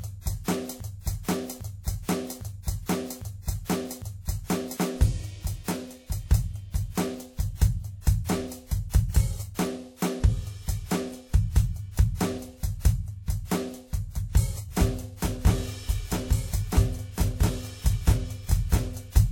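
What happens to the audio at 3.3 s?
The playback or stream likely stalled between 0.80 and 4.77 s and kept resending the last fragment it held, so 3.3 s falls inside a broken-record loop: a 0.80 s slice of the music repeats exactly, back to back, five times, and the music that belonged there is lost.

Underneath, the music was likely transcoded between lossy codecs, from WMA at 64 kbit/s to HE-AAC at 40 kbit/s. The second encoder spends bits re-encoding the first one's artefacts, so both sets of artefacts are audible together, and nothing remains above 18.5 kHz.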